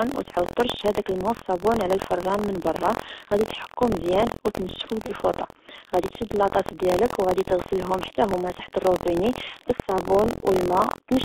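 Speech squeezed through the G.723.1 codec at about 6.3 kbit/s, so everything sits between roughly 250 Hz and 3.7 kHz. Damage is heavy: the voice comes out dull and hoarse, consonants smear, and the slow-moving voice model can't keep up with quick changes. On top of that, there's buffer tearing running the whole way through: a rough 43.1 Hz buzz that only shows up while someone's talking. The writer and the playback hardware have drifted until they cross inside each period, which fits a 1024-sample buffer. That leaves a small slice of every buffer holding audio from about a tenth of a second earlier, with hard joins on both sides. Right after "تحكو مزيان أو تنشفو" there's VoIP packet loss concealed by the speech codec, from 5.06 to 5.13 s. About 30 ms went missing, which fits one lost frame. The decoder stretched its last pitch and filter into a fading patch, and the voice stays weak briefly after.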